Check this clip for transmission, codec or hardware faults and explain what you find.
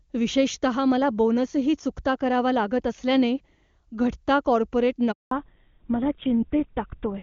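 Two faults are audible, both around 5.1 seconds into the speech.

Handover gap, 5.11 to 5.31 s: while the call passes from one network to another, no speech frames reach the receiver for 200 ms. The sound fades within a few tens of milliseconds and stays silent until the new link begins carrying audio.

Fallback to narrowband, 5.31 s to the end: once the link resumes, the call is no longer carried in HD Voice, and nothing above 4 kHz survives. The speech sounds duller and rougher, consistent with a drop to GSM full rate. Before the switch the AMR wideband (HD Voice) codec sounds clean, fitting its highest rate.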